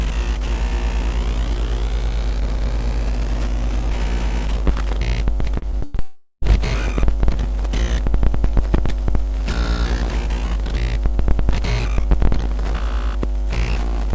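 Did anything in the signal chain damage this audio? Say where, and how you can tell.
Yes. Between 5.58 and 6.00 s the network stage shows repeated packet loss (robotic sound): five short gaps, the longest about 100 ms, each patched by extending the previous audio, so 43% of that span is concealment and the sound turns choppy.

From 6.00 to 6.44 s about 420 ms of audio is simply absent, replaced by a smeared continuation of the last sound that fades to about 30 ms of silence before the signal resumes. This is likely a long network dropout, with the jitter buffer's concealment covering the hole.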